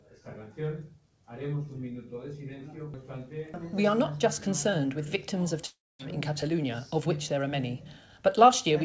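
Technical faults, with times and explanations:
5.66 to 6.01 s, long network dropout: the audio likely stopped arriving over the network, and 340 ms of it was never played. The receiver filled 331 ms of that gap by stretching the last sound into a fading buzz that thins out, leaving 240 ms of near silence before the audio resumes further on with the lost part gone. The call codec's band, which ends at 8 kHz, is heard on either side.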